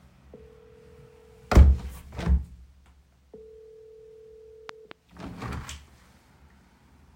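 A loud pop lands between 4.69 and 4.93 s: two sharp pops in quick succession, around 10 dB above the surrounding sound. The likely cause is a sudden voltage step or pulse entering the signal path, such as a plug being seated, a switch being thrown, a static discharge or a driver glitch, which the downstream circuitry then shapes into a brief thump. The sounds in the recording carry on underneath without interruption.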